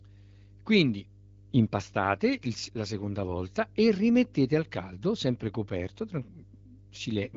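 Mains hum runs under the whole speech clip, a steady 50 Hz drone sitting roughly 25 dB below the voice, likely from a ground loop or nearby transformer.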